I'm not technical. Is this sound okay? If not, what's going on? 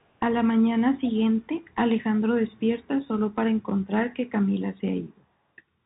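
No. From start to finish the speech sounds thin and muffled, like a phone call. The s sounds come out scratchy, louder moments get rough and distorted, and a fine grainy hiss sits underneath. This is the Bluetooth CVSD headset codec, an old narrowband format used by wireless headsets. It records only whether the sound is moving up or down at each instant, so nothing above about 4 kHz survives, and fast, bright sounds outrun it and break up.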